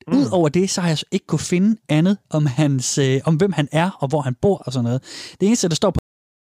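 At 5.99 s the speech stops abruptly in a cut-off end. The final buffers were never written or played, so the sound is chopped mid-utterance. It falls straight to digital silence with no natural decay. That silence runs to the end, about 0.59 s.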